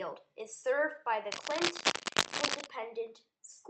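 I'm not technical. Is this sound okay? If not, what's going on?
No. From about 1.31 to 2.67 seconds a rough scratching, rustling noise sits over the speech, roughly as loud as the speech itself. This is cable scratch noise, most likely from a worn cable, plug or control being moved. A poor contact makes the connection flicker rapidly, adding bursts of noise. Separately, the call connection trims the highest frequencies above 8 kHz, which is expected for that kind of call.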